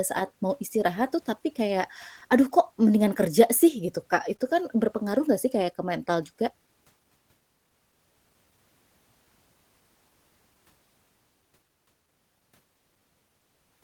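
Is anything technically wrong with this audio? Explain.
Yes, a few timing problems show up in this speech clip.

Clock drift between sender and receiver runs through the whole clip. The sender's clock runs roughly one and a half percent slow, so the receiver's buffer keeps draining. You hear small, unevenly spaced hiccups in the timing rather than one obvious glitch.

At 4.37 to 4.41 s there's a short stall from a late packet. A packet arrived late, the buffer ran dry, and the receiver held the last sound for 20 ms until it showed up. Nothing is lost, but that moment drags slightly, with a faint buzz or dip.

From 5.59 s to 13.79 s you get repeated timing corrections. The receiver keeps repeating tiny slices to keep pace with the slow sender, effectively playing at 99% speed and stretching things by about a tenth of a second overall. At most it comes across as faint hiccups or a slightly unsteady tempo.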